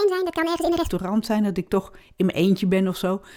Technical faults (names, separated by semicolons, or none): section at the wrong speed